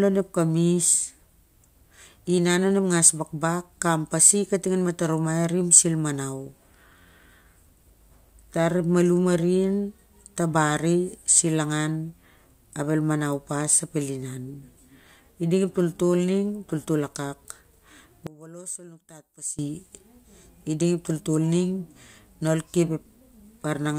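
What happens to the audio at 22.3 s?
Nothing goes wrong at 22.3 s; the speech there plays through intact, with no dropout, click or distortion.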